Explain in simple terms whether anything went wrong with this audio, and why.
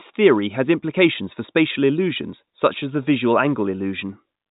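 Nothing went wrong with this speech recording: it carries the ordinary narrow sound of G.711 telephone coding, the standard landline format, which keeps nothing above about 3.8 kHz and so loses the high, airy part of the sound by design.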